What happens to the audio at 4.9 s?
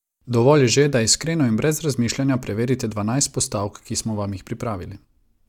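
Nothing goes wrong at 4.9 s; the speech carries on cleanly there, with no dropout, click or distortion.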